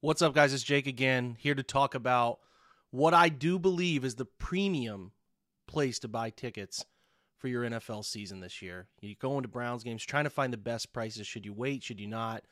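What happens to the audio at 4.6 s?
Nothing goes wrong at 4.6 s; the speech runs through that moment intact, with no dropout, click or other fault.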